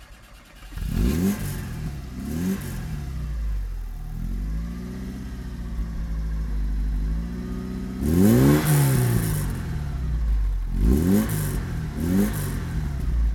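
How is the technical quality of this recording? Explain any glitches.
No glitches or faults heard.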